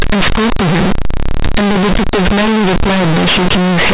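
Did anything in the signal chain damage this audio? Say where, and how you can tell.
Yes. At the sample-format conversion stage, mu-law companded audio was read as linear 8-bit samples and never expanded, so the speech is a loud, buzzy distortion throughout, with heavy noise filling the pauses. Plain clipping would leave the pauses quiet. Here quiet passages swing as wide as loud ones.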